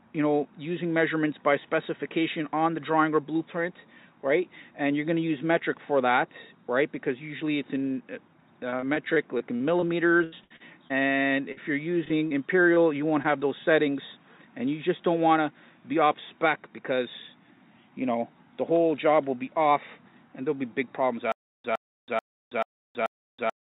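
From 8.7 to 10.92 s there is repeated packet loss (robotic sound). Thirteen separate gaps, the longest 81 ms, were each patched by extending the preceding sound, about 0.4 s in total or 18% of the stretch. The result is a choppy texture that persists. This distinguishes it from an isolated dropout.

At 11.52 to 11.58 s a burst of packet loss removes about 40 ms in one piece. The receiver holds and fades the last sound across the hole, giving a single brief buzz or hiss before the audio resumes with that part missing.

Short concealed packet loss follows at 12.04 to 12.08 s, 12.08 to 12.12 s, 12.28 to 12.32 s, 12.74 to 12.78 s and 13.22 to 13.26 s. Each covers about 20 ms. The gaps are too brief to buzz, so they register only as small smears or wobbles blended back into the real signal.

From 21.32 s to the end, a stutter with silent gaps takes over. A 112 ms fragment repeats five times, every 435 ms, with about 324 ms of digital silence between repeats. 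The true silence and the strict even pacing point to a likely stalled playback or stream rather than network concealment. Throughout, nothing is present above 4 kHz, consistent with the G.711 A-law call path.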